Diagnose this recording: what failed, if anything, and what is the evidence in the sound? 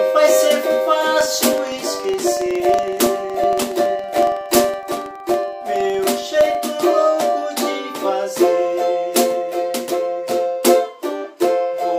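A filter restarted on every block runs from 1.21 s to 6.62 s, a fault in the driver or buffer processing stage. The evidence is a steady tick-buzz at 21.5 Hz that rises and falls with the loudness of the sound. That rate fits a 2048-sample block. The filter discards its stored state at each block boundary and restarts from silence. Each block therefore opens with a small transient, and these transients repeat at the block rate.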